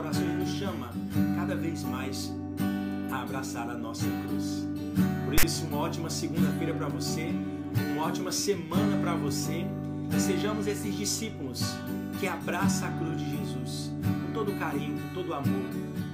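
A hard-edged burst of rasping static, lopsided toward one side of the waveform and ending in a brief dropout to silence, breaks into the audio from 5.38 to 5.44 s. This is file tags played as audio: a block of text tags and their zero padding was read as samples.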